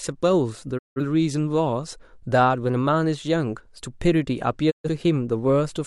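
Speech quickly fades to silence at 0.77–1.01 s and again at 4.70–4.89 s, a digital broadcast dropout: the receiver muted on missing or corrupt frames, losing that audio.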